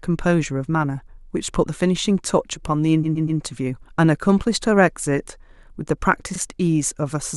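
At 3.03 s there's repeated frames: a 120 ms chunk of compressed speech gets played three extra times, giving a stutter that runs to 3.39 s and adds 360 ms. At 6.35 s a 40 ms block repeats once, adding 40 ms.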